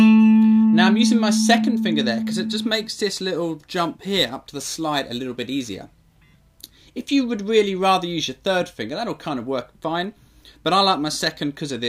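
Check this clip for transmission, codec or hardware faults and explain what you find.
One fault: from 3.35 to 6.12 s a gritty, inharmonic fizz rides on the louder and brighter parts of the sound, only about 20 dB below it. This is crude rate conversion. Samples were repeated by nearest-neighbour picking without filtering, which fits a 44.1 kHz to 48 kHz change, and this adds shifted, inharmonic copies of the audio.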